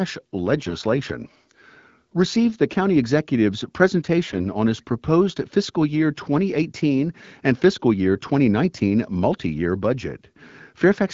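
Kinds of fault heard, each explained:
AMR bit errors: From 4.30 to 4.42 s the speech turns briefly hoarse and gargly while keeping its rough pitch and loudness. A noisy radio link corrupted the weakly protected bits of the AMR-WB frames, here at a rate of around one bit in twenty, but the check on the critical bits still passed. The decoder therefore placed its excitation pulses wrongly and misread fine pitch, gain and spectral values. The roughly 0.13 s span fits about six 20 ms frames.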